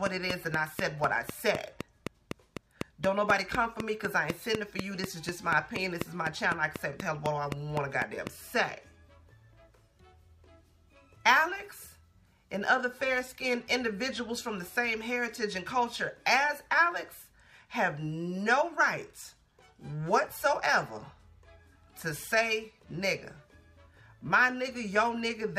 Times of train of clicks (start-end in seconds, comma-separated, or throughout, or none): 0.06-8.28